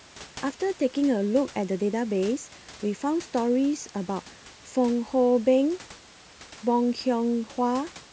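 Nothing stood out on listening to this speech recording; the only background sound is the room's own ambient noise, sitting about 23 dB below the speech.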